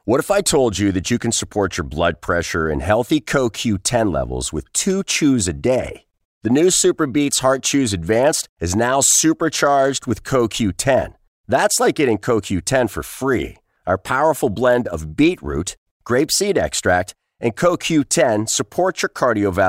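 Periodic USB or driver dropouts run from 12.95 s to 19.09 s in this speech clip: about seven ticks, spaced 1.02 s apart, where a tiny fraction of a millisecond of audio is skipped each time a recurring background task stalls the audio path.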